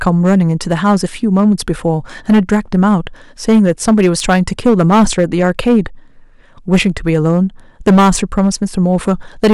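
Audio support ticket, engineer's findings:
Hard clipping, whole clip. Harsh fuzz on every loud speech peak. Gain stage or converter driven about 10 dB past full scale. Peaks flattened on a few percent of samples, adding high harmonics. Crackle tracks loudness with no dropouts or level pumping, so overload, not packet loss or a limiter.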